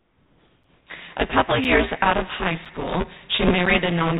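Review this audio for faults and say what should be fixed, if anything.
Buffer tearing runs through the whole clip as a rattling buzz at 172 Hz, which fits a 256-sample buffer. In each period, a bit under half the buffer holds audio from about 10 ms earlier, joined on hard edges.

Comfort noise in place of the background fills 0 to 0.87 s. The real background becomes a flat, featureless hiss about 3 dB quieter, likely synthetic noise inserted during discontinuous transmission.

Gaps between chunks appear at 0.64, 1.64, 2.65 and 3.66 s. Each is a short hole of about 7 ms, repeating every 1.0 s where one chunk joins the next.

To prevent these, keep the writer at least one full period ahead of the hardware read position, disable discontinuous transmission, and join chunks without padding or late starts.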